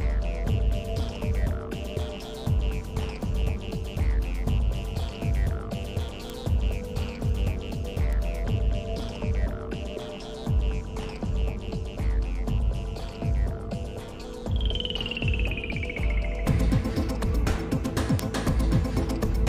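Single flipped bits in the digital path cause bit error spikes at 6.30, 7.29, 8.13 and 18.19 s: broadband ticks unrelated to the sound, peaking at about -12, -30, -18 and -6 dBFS.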